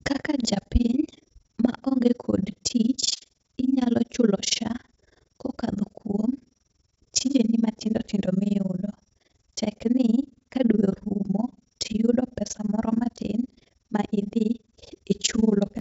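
Speech throughout carries overlap-add ripple: level dips about 60 dB around twenty times a second, a steady robotic flutter locked to frame rate, unlike irregular packet-loss dropouts. The call path stops at about 7 kHz, consistent with a wideband codec.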